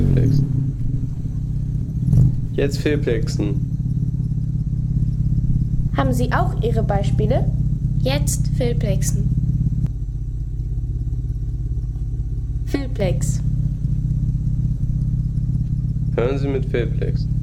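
The audio shows channel delay (comb filtering) from 9.87 s to 13.00 s: one channel lags the other by roughly 3 ms before the two are summed to mono, cancelling shared content at evenly spaced frequencies. The first notch sits around 200 Hz, giving a hollow, phasey colouration.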